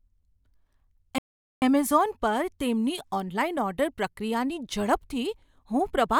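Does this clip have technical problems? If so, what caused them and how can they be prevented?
Yes. A playback stall at 1.18 to 1.62 s silences the speech for about 0.44 s, likely because the player ran short of buffered data or its audio thread was blocked. Prevent it with a larger playback buffer and a high-priority audio thread.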